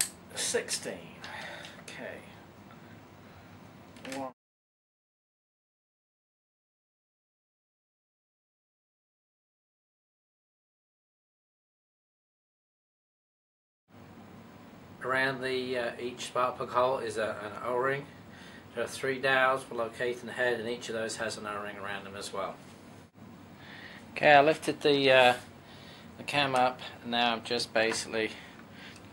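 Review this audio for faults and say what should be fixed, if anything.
Nothing stood out on listening, so there is nothing here that needs fixing.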